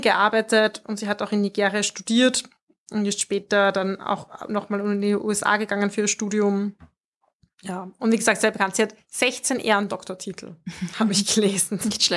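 From 3.6 to 5.3 s the speech carries a steady 20 Hz ticking buzz, present only while signal is there. It comes from a resampler restarted on every block: each 50 ms block was converted in isolation, likely a 48 kHz to 24 kHz step, leaving an error at every block edge.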